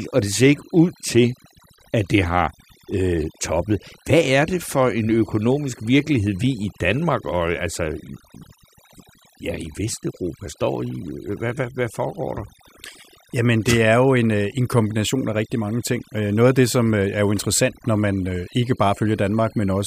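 From start to finish a faint, high whistle sits behind the speech, wandering in pitch between about 3.51 and 4.47 kHz and centred somewhere near 4 kHz. It stays well below the voice, roughly 40 dB down. This is a switching supply whistle: a switch-mode power supply in or near the recording chain is cycling at an audible rate, and its frequency moves as the load on it changes.

Throughout the clip the gaps between phrases drop to an unnatural near-silence flecked with tiny twinkling specks. That is overdone noise removal. A denoiser set far too aggressively is shutting off individual frequency bands whenever their level falls close to its noise estimate. Quiet parts of the speech get cut away with the noise, leaving isolated fragments that flicker on and off.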